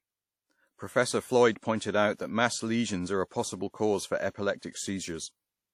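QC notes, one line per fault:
Throughout: WMA compression, plainly audible across the speech. It has a ringing, washy quality with a hiss that rises and falls with the signal, which points to a low bitrate, likely WMA at around 48 kbps. Long transform blocks smear quantisation noise over tens of milliseconds around each syllable, and weak spectral lines are dropped. On a spectrogram, content stops sharply at 18.8 kHz, with gappy, blotchy texture and pre-echo smears before onsets.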